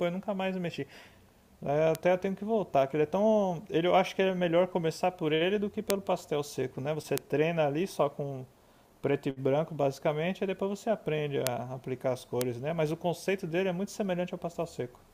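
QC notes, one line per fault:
1.95, 5.90, 7.18, 11.47 and 12.41 s, bit error spike: single ticks one or two samples wide, reaching about -8 dBFS at first and about -2 dBFS after, from a flipped bit throwing the value by a power of two. Unlike a dropout click, no audio goes missing, and the broadband tick ignores the speech around it.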